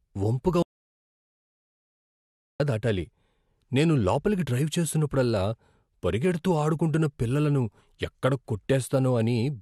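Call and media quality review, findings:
Audio dropout to silence, 0.63 to 2.60 s: speech cuts to silence, no room tone, about 2 s gone. Likely input device or link lost while encoder kept writing zeros.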